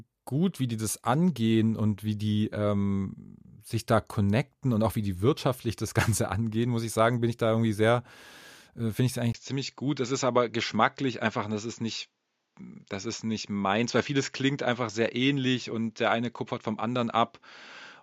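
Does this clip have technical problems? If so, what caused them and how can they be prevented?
Yes. From 9.32 s to the end, the speech turns duller and boxy, with nothing above 7.6 kHz, after a brief 20 ms gap at the change. Loudness stays about the same, but a faint new background noise appears, roughly 50 dB below the speech. This is likely an input switched to a poorer device mid-recording, one with a narrower band and its own noise floor. To prevent this, lock the recording input to one microphone and disable automatic device switching.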